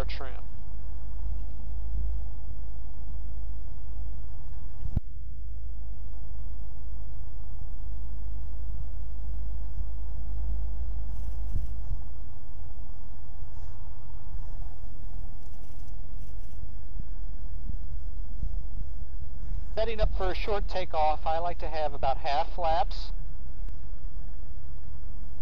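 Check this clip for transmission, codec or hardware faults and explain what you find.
Three short faults from damaged data in a compressed stream, at 10.78–10.82 s, 16.95–17.01 s and 23.69–23.73 s. Corrupted frames make the decoder lose sync and resynchronise, producing brief chirps, squawks, clicks or short holes.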